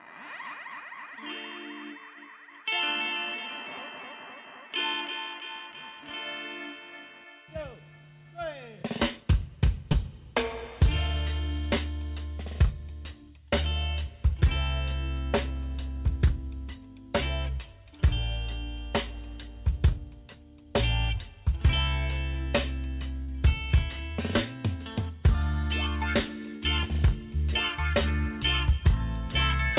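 Call audio band-limited to nothing above 4 kHz, which fits a G.711 mu-law path at 64 kbps. Short concealed packet loss appears at 9.92 to 9.96 s and 23.24 to 23.30 s, where about 20 ms and 40 ms were lost and bridged by extending the preceding sound, heard as brief smears. A burst of packet loss at 26.56 to 26.64 s drops 60 ms, filled with a decaying continuation of the last sound before playback resumes later in the audio.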